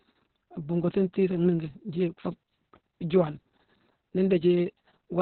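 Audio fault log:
Throughout: Opus voice compression, heavy, in narrowband SILK mode, which fits a bitrate around 6 kbps. The speech sounds muffled, hoarse and faintly robotic because the band stops at about 4.3 kHz and the excitation is coarsely coded. A spectrogram shows an empty band above 4.3 kHz and blurred harmonics.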